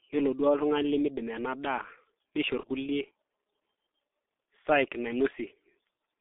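The whole clip passes through the G.723.1 codec. The speech is confined to roughly 250 Hz to 3.6 kHz, so it sounds muffled. Heavy coding damage leaves it hoarse with smeared consonants, which fits a low rate near 6 kbit/s.

From 2.60 to 2.67 s there is VoIP packet loss concealed by the speech codec. The decoder fills the gap by repeating its last pitch and filter with falling gain. It sounds like a short buzzy or noisy smear that fades, which fits one lost 30 ms frame.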